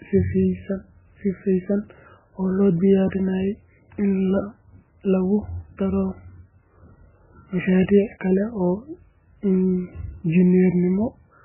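The whole clip has heavy MP3 compression damage, likely from a very low bitrate around 8 kbps: nothing above 3 kHz, with watery, swirly speech and smeared consonants.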